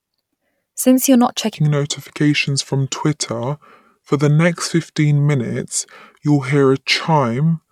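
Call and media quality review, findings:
Section at the wrong speed, 1.54 s to end. Speech drops to 0.739x speed, roughly five semitones lower, slow and deep. Likely playback or resampling against the wrong clock.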